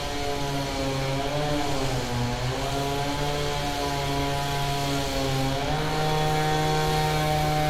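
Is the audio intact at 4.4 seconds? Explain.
Yes, the audio is intact at 4.4 seconds, with no fault at that moment.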